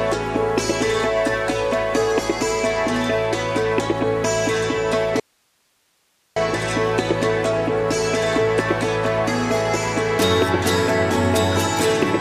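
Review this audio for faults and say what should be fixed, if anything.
An audio dropout to a faint residue runs from 5.20 s to 6.36 s, about 1.16 s in all. The sound cuts off abruptly and returns just as suddenly, and the gap holds only hiss, roughly 45 dB below the normal level. Such a sharp edge with live hiss underneath is likely a momentary loss of the source feed while the downstream path stayed open. Prevent it by securing the input connection and monitoring the feed during capture.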